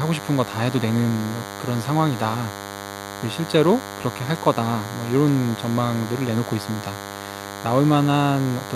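DECT cordless phone buzz runs throughout this speech recording. A nearby DECT handset or base emits radio bursts every 10 ms, rectified into a thin 100 Hz buzz roughly 10 dB below the speech.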